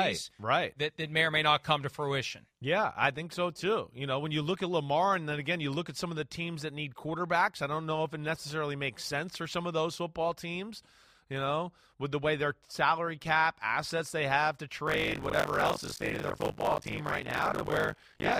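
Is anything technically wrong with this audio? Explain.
Yes. Buffer tearing runs from 14.86 s to the end: the writing program and the playback hardware have slipped, so within every 20 ms period about half the buffer replays speech from roughly 40 ms earlier, hard-joined on both sides, producing a robotic 50 Hz buzz whenever there is signal.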